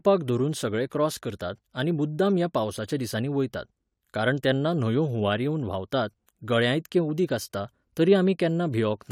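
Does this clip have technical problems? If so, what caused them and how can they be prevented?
No, there are no technical problems in this clip.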